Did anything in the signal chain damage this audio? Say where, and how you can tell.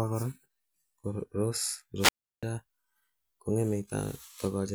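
Yes. From 1.98 s to 2.43 s the speech gives way to a short burst of hiss and then a hole of near silence lasting 340 ms. This is a wireless microphone squelch dropout: the analogue FM radio signal faded, and the receiver's squelch muted its output until the signal recovered.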